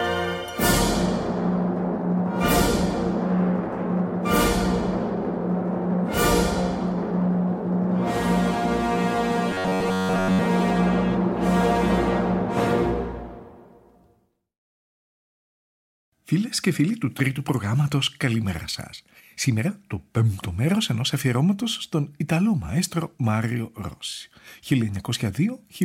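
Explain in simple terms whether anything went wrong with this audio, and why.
From 9.51 to 10.47 s the sound turns into a flat, metallic buzz near 94 Hz. This is robotic sound from repeated short buffers. Most of that stretch is a tiny slice of about 11 ms looping, likely because new audio arrived too slowly. Unlike a dropout, the sound never goes silent.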